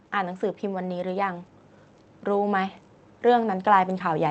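A speech recording carried over a call link, with an automatic gain rising fault from 2.25 s to the end of the clip. The gain control judged the input too quiet and began raising its gain step by step, so the voice and the background noise swell together over those last two seconds rather than the level holding steady. The passage through the Opus call path is audible as ordinary coding texture, with the top of the spectrum limited to about 8 kHz.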